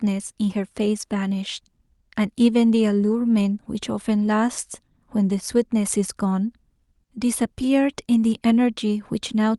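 No technical faults are audible.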